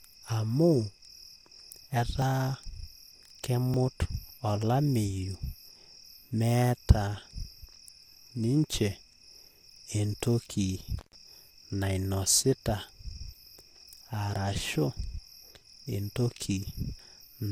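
Dropped buffers, likely from an input overrun, hit this speech clip at 2.22 s and 3.74 s: at each the sound jumps forward, with roughly 40 ms missing at the first and roughly 20 ms at the second. No gap of silence is heard because the audio on either side is spliced straight together, the hardware having overwritten those samples before the software read them. An intermittent contact follows from 10.99 s to 11.15 s, where the line opens for about 127 ms. The sound cuts out with crackle at both edges and faint hiss during the break, the mark of a loose plug or cable briefly losing connection.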